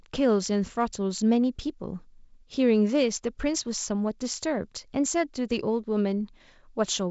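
Nothing stood out on listening to this speech clip, which carries the band-limited, lightly hissy character of G.722 wideband telephone coding at 56 kbit/s, with nothing audible above about 7.7 kHz.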